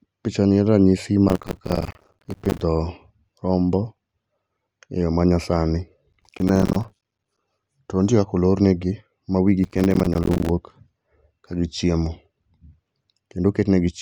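Speech carrying three bursts of gritty, tearing crackle, at 1.28 to 2.61 s, 6.13 to 7.39 s and 9.64 to 10.50 s, each stopping cleanly afterwards. This is processor overload crackle: the processor repeatedly failed to fill its audio buffers on time, and each miss left a hard-edged gap of silence. The rapid run of gaps points to very short buffers of roughly 5 ms, and so many of them, one after another, merges into crackle.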